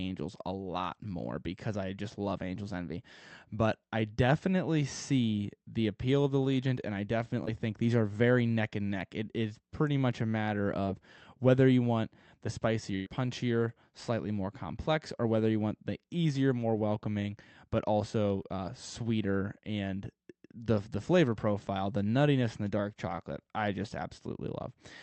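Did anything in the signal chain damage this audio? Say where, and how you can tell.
Yes. Short concealed packet loss, a network-stage fault handled by the receiver's concealment, shows up three times: 7.45–7.49 s, 10.85–10.88 s and 18.42–18.46 s. Each is a brief smear or wobble in the speech where about 20 ms of audio never arrived in time. The decoder bridged the hole by extending the preceding sound for roughly 10 to 20 ms and then crossfading back into the real signal.

A burst of packet loss at 12.96–13.08 s is the longer network event. About 100 ms of consecutive audio went missing, and the receiver filled all of it, roughly 103 ms, by stretching the last sound while fading it down, with no silence left in the gap. You hear a held buzz or fading hiss, then the speech picks up further along, with the material in between gone.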